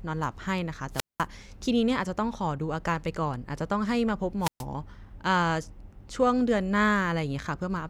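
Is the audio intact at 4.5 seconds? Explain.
No. From 4.41 to 4.64 s the speech breaks up: hiss swells, then a hole of near silence about 124 ms long, before the voice returns. This is a wireless microphone squelch dropout, where the FM radio signal fades and the receiver's squelch mutes the output.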